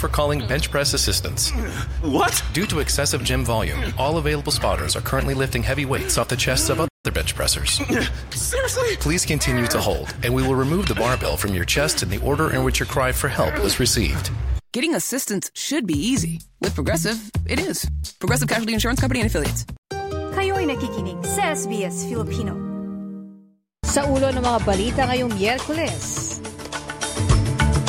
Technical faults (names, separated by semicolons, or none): playback stall